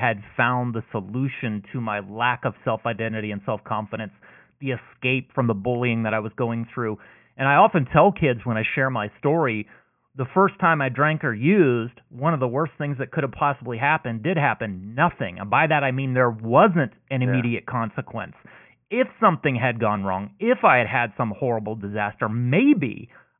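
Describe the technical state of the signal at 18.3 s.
At 18.3 s the speech signal is intact, with no dropout, clipping, distortion or other audible fault.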